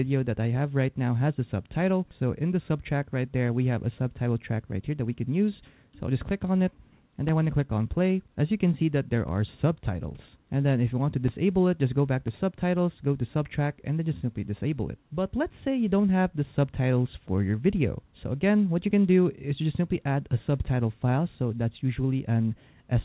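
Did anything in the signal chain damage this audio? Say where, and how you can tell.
Yes, at the driver or buffer stage: periodic USB or driver dropouts. From 6.28 s to 12.28 s, something blocks the USB transfer or audio driver once every 1.0 s, and each time a few milliseconds of audio never arrive and are replaced with silence. You hear this as about seven evenly spaced ticks at that one-second rhythm. They cut into the signal itself, which has nothing above the 4 kHz ceiling set by the G.711 call codec.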